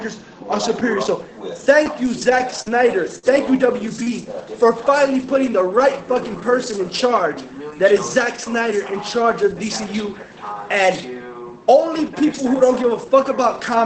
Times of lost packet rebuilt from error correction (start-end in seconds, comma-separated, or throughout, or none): 6.70-6.74